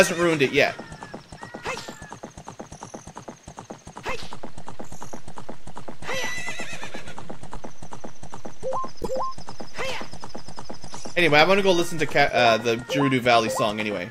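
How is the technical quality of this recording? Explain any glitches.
There's one glitch worth flagging. From 9.01 to 9.07 s the audio jumps ahead with a brief chirp, burst of noise or short hole, likely a broken MP3 bit reservoir: frames after a cut borrow bytes that aren't there anymore, which fits 24 ms frames.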